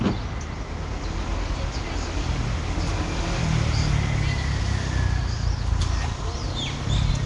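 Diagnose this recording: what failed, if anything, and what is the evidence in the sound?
Codec stage. Throughout, the sound is rough, hissy and smeared, with nothing above 10.6 kHz. Likely Nellymoser compression, starving weak bands of bits and filling them with noise.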